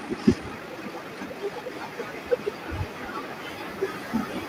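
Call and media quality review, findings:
Time-stretched section, 0.0–1.72 s: speech at 1.73x pace, rushed, pitch unchanged, abrupt slowdown at 1.72 s; likely software time-stretch dropping short pieces to fit a target length.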